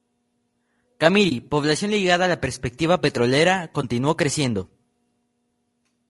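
It's a speech clip with a rough, grainy texture all the way through: hiss sits between the harmonics and the top end sounds thin and a bit synthetic, pointing to low-delay AAC compression, likely AAC-ELD at a low bitrate of around 32 kbps, where short frames can't resolve pitch detail well. There's also AAC frame loss with muting, twice: a soft dropout from 1.29 to 1.32 s, just before "población ligada a la", and another from 3.81 to 3.84 s, right after "a la perspectiva petrolera". Each fades out and back in, which fits a single zeroed frame of about 20 ms smoothed by the overlapping windows.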